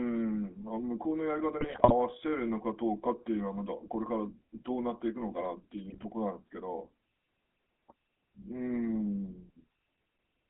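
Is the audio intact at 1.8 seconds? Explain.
No. From 1.60 to 1.93 s the speech is hit by GSM bit errors: flipped bits reach the decoder and corrupt the filter, pitch and gain values, so frames squawk, pop and gargle. Unlike a packet dropout, the sound doesn't go silent or repeat. It turns into garbled, jumping bursts.

Underneath, the GSM full-rate codec is audible at 1.8 s and throughout. Its pulse-driven vocal-tract model gives a buzzy, gravelly roughness within a 250 Hz to 3.7 kHz line band, which fits 13 kbps coding. Plain band-limiting would only sound muffled, without that grit.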